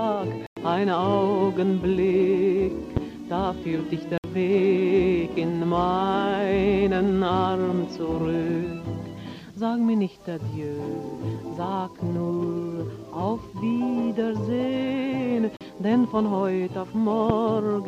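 At 0.47 to 0.57 s the sound cuts to silence for about 100 ms, then resumes further along as if it had kept playing. This is a Bluetooth dropout, likely packets that reached the headphones too late and were discarded. On a waveform it is a flat gap, and on a spectrogram a clean vertical blank across all frequencies. The length fits roughly five lost packets.

At 2.97 to 2.99 s a single loud pop, about 15 dB above the surrounding level, sits on top of the continuing sound. It is likely a sudden voltage step, such as a switch or driver glitch, shaped by the downstream circuitry. It shows as a tall narrow spike in the waveform and a thin full-height vertical stripe on the spectrogram.

Two more Bluetooth dropouts follow, with the same likely cause of late packets. The first, at 4.18 to 4.24 s, lasts about 60 ms. The second, at 15.57 to 15.61 s, lasts about 40 ms. Both appear as shorter silent notches.

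A second pop of the same kind, likely another voltage glitch, lands at 17.30 to 17.32 s, again about 15 dB above the signal and appearing as a single spike.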